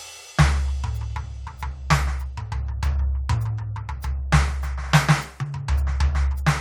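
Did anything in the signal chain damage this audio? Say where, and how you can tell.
No, nothing in the signal chain damaged this audio.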